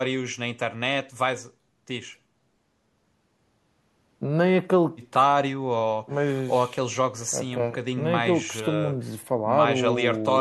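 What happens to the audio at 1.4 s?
At 1.4 s the speech carries on intact, with no dropout, click, distortion or other fault to be heard at that moment.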